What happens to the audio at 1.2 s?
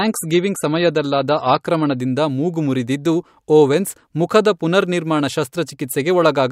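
At 1.2 s the speech is still inside an opening stretch of adaptive stream starting at a low bitrate, running from 0.0 to 2.0 s. The player begins on a thin, heavily compressed version, roughly what a 35 kbit/s MP3 gives, then jumps to a fuller one, consistent with 128 kbit/s, once the connection is measured. Until 2.0 s the speech sounds dull and smeared. A spectrogram shows nothing above 13.8 kHz there, then a sudden, gapless brightening.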